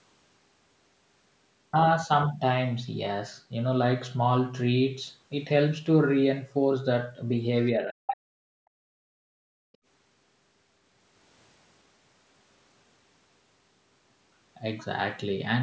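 From 7.77 to 8.29 s the speech is suppressed in double talk. For about half a second the talker's level sinks by as much as 40 dB. The likely cause is an echo canceller that heard both sides at once and turned everything down.

Between 8.07 and 8.16 s the other side's voice leaks through. A short scrap of a second voice appears, only a little quieter than the talker. Residual loudspeaker echo likely slipped past the canceller here.

From 8.57 to 9.8 s the background is gated by the echo canceller. The room sound drops by about 36 dB for roughly a second, then returns. The canceller clamped the microphone while the loudspeaker played.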